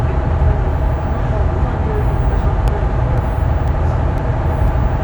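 From 2.68 s to 4.68 s, periodic USB or driver dropouts break into the sound every 0.5 s. Each time, a fraction of a millisecond goes silent, about five times in all. A blocked bus or driver likely causes these regular ticks.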